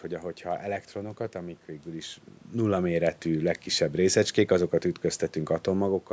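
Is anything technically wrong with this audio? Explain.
No, nothing here points to a technical problem: the background is just the room the microphone is in, the level shift around two and a half seconds is the talker moving relative to the microphone, and the missing deep bass is the call's normal microphone processing.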